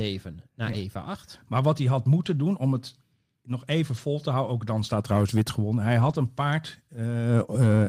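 Lost packet rebuilt from error correction occurs at 0.65–0.75 s, between "om het nog even" and "te houden ook dan" at 3.97–3.99 s, just before "een paard" at 6.01–6.15 s, and just after "een paard" at 7.03 s. Each time, the lost audio was replaced by the reduced-bitrate copy carried in the following packet. The speech never breaks, but those 60, 20, 80 and 20 ms stretches sound rougher and noisier, consistent with runs of roughly three, one, four and one 20 ms packets.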